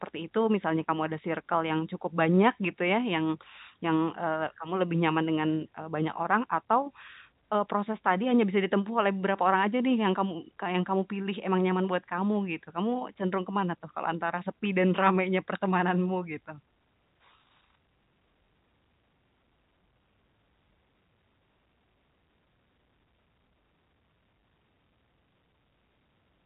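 Speech carried over a G.711 telephone path, band-limited with nothing above about 3.8 kHz, and no technical faults are audible anywhere in the clip.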